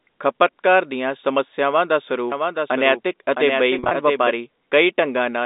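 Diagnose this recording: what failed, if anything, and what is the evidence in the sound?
Doubled audio track, 2.32 to 4.30 s: a second full-band copy of the speech runs about 0.7 s behind the original and about 5 dB quieter. It carries no reverberant tail or room colouring, and it cuts in and out abruptly at both ends, so it is not an acoustic echo. The likely stage is call processing or the capture chain, with a slower second path or an edit feeding the same signal into the mix twice, out of step.

Packet loss with pitch repetition, 3.79 to 3.91 s: within this 120 ms stretch, about 90 ms of audio is missing in scattered gaps, none longer than 40 ms. Each gap is filled by repeating the last pitch period, which gives a briefly held, buzzy quality instead of silence. The pattern fits a burst of lost packets of roughly 10 ms each at the network stage, concealed by the receiver. It falls inside the doubled section, with the narrow A-law telephone band of about 250 Hz to 3.7 kHz underneath throughout.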